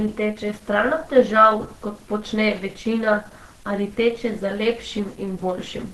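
Speech throughout with plainly audible Opus compression damage: muffled and hoarse. This likely comes from Opus in hybrid mode at a low bitrate around 16 kbps, and a spectrogram shows a hard ceiling with nothing above 12.1 kHz.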